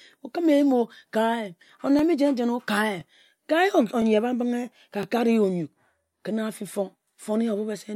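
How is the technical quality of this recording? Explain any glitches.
The speech has a regular stutter from overlapping chunks. Clicks land at 0.98, 1.99, 3.01, 4.02, 5.03, 6.05 and 7.06 s. The audio was handled in 1.0 s chunks, each starting about 13 ms early. That sliver plays twice at every join, giving a brief click or hiccup.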